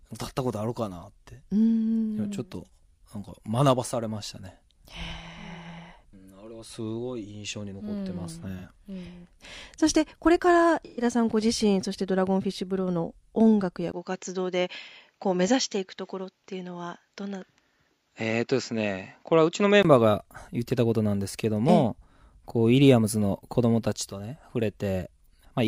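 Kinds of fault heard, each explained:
AAC frame loss with concealment: the decoder lost a few AAC frames and covered the gaps by reusing its last good spectrum. There's a short smeared, noisy patch of about 43 ms at 8.59 s, then a longer 128 ms smudge from 10.85 s.
Input switched to a poorer device: from 13.92 to 19.85 s everything above 7.6 kHz vanishes, after a 20 ms dropout, with new background noise about 50 dB down and no real level jump. That's likely the recording jumping to a narrower-band microphone.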